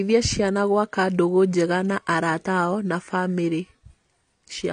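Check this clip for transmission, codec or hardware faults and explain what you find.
There is one fault, and it runs through the whole clip. AAC compression, present throughout: the speech loses everything above 9.8 kHz, and the damage is plainly audible, likely from an AAC-LC encoder at a low bitrate around 32 kbps. The encoder lowers its cut-off and quantises the remaining bands coarsely, so consonants sound dull and smeared, with a warbling, fizzy texture on sibilants.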